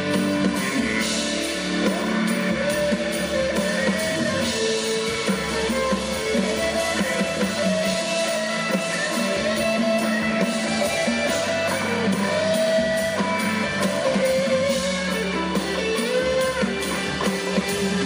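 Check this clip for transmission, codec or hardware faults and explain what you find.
No faults can be heard in this clip. Nothing in the audio stands out as a defect worth tracing.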